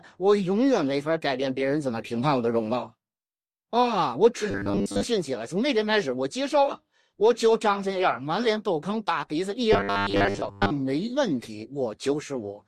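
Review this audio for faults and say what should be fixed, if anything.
Robotic sound from repeated short buffers occurs at 4.51 to 5.05 s and 9.73 to 10.72 s. A rigid 100 Hz buzz appears, most likely because a 10 ms slice is replayed during roughly 70% of each stretch while fresh audio is skipped. Unlike dropouts, there are no silent gaps, and unlike bit-crushing, the buzz sits at one fixed pitch. A larger jitter buffer or steadier audio delivery would prevent it.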